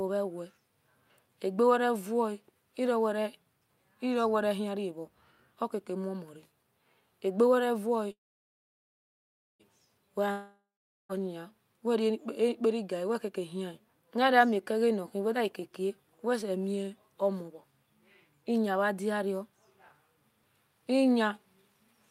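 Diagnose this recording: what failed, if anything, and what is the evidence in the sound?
The first fault is a call audio freeze at the network and jitter-buffer stage. From 8.11 s to 9.62 s the sound stops: the last fragment carries on briefly as a fading buzz, then about 1.44 s of silence follows. Playback resumes exactly where it left off, so nothing is lost, but everything after is about 1.48 s later. The likely cause is packets held up in transit until the jitter buffer ran dry, with the receiver filling the wait.

The second is a long network dropout, also at the network stage, from 10.31 s to 11.12 s. Again the last sound is extended as a decaying hiss, fading to roughly 0.44 s of silence. This time the audio returns further along, and about 0.78 s of material is simply gone. The pattern points to packets that were likely lost outright rather than delayed, so the concealment covered a gap that was never recovered.

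The third is a jitter buffer speed-up, a playout-buffer adjustment, from 15.27 s to 16.19 s. The speech runs at about 105% of normal rate with the pitch unchanged, so it sounds slightly hurried rather than higher. The receiver trimmed short pitch-period slices repeatedly, removing roughly 50 ms in total, to drain excess buffered audio, consistent with delayed packets arriving together.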